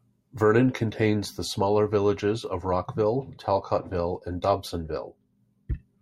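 No technical faults occur at any point in the speech, so there are none to describe in time order.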